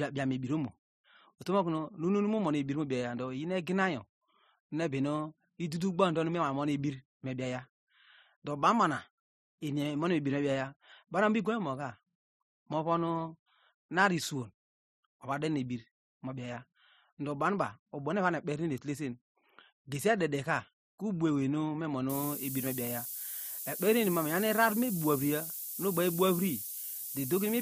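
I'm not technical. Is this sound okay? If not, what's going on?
No. From 22.10 s to the end, a harsh hiss appears, almost as loud as the speech. This is low bit depth with noise shaping, which fits roughly 6-bit audio.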